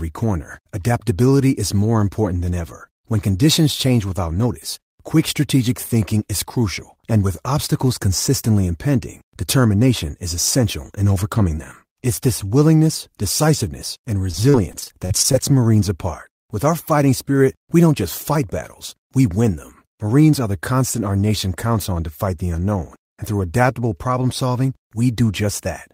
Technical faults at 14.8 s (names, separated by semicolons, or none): repeated packet loss (robotic sound)